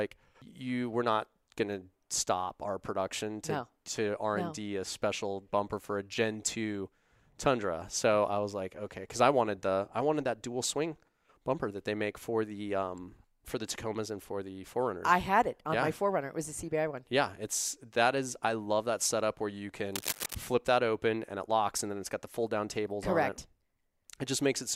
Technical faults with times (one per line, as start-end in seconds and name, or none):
19.94-20.35 cable scratch noise